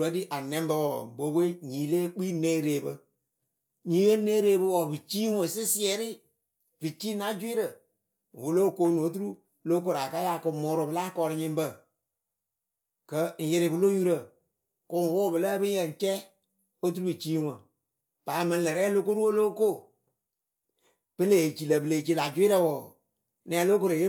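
No technical faults can be heard anywhere in this speech recording.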